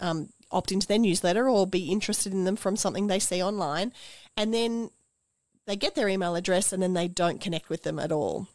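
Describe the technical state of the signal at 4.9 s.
Nothing is wrong with the signal at 4.9 s; the speech runs intact through that point with no audible fault.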